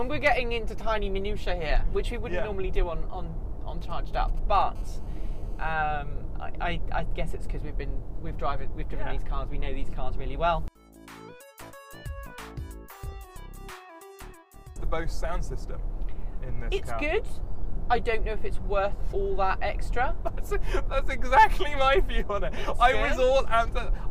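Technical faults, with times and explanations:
3.81–4.63 s, GSM signalling bursts: a galloping dit-dit-dit of short buzzes at about 217 Hz, roughly 25 dB below the sound. A nearby 2G phone is exchanging brief signalling with its network, and the audio circuitry rectifies those intermittent radio bursts into short buzzes.
4.75–5.73 s, GSM phone buzz: a hard, raspy, harmonic-rich buzz at 217 Hz, about 33 dB below the sound and unrelated to it. The phone has moved into a call, transmitting steadily 217 times a second, and each rectified radio pulse becomes audible.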